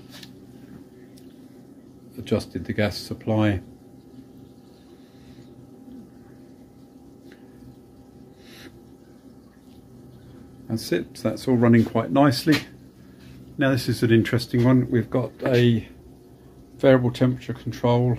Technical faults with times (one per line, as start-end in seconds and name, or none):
none